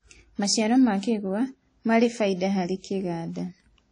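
Throughout, the speech sounds ringing and washy, with breathing hiss and nothing above 10 kHz. Likely WMA compression, fitting a low bitrate near 32 kbps.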